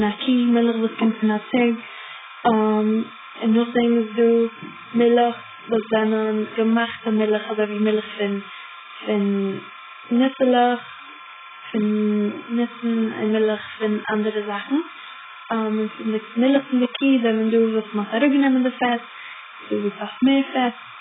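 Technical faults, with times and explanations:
Throughout, timecode bleed: a steady chirping warble roughly 20 dB below the speech, from 30 frame-per-second code switching near 1 kHz and 2 kHz, seen as constant spectrogram bands.
Throughout, AAC compression: the speech is dull and smeared, with nothing above 3.7 kHz, likely from heavy AAC-LC coding at a very low bitrate; the spectrogram shows a hard ceiling and patchy holes.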